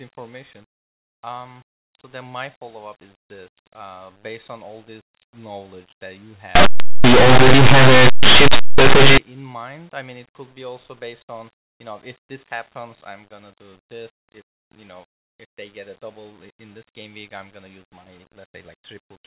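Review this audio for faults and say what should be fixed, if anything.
Linear audio read as companded, from 6.55 to 9.18 s, just after "this knowledge that you" and ending before "in mind I mean": plain linear 8-bit samples were decoded as mu-law codes, so values just on one side of zero expand to near full scale while the others stay tiny. The result is harsh, loud distortion across the whole stretch. To prevent it, carry the sample coding in the file header or stream metadata and have the decoder check it, rather than assuming mu-law for 8-bit data.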